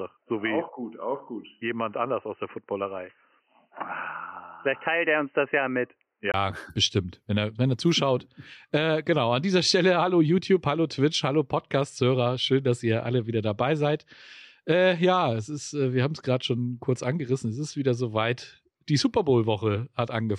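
A speech clip whose first 6.34 s carry nothing above 3 kHz, giving a dull, boxy sound, most likely because the input had been switched to a poorer device. At 6.34 s a silence of about 20 ms marks the change back, and the full band returns just before "bestimmt wenn er wenn". The narrowband stretch also sits roughly 5 dB lower in level and carries its own background noise, roughly 55 dB below the signal.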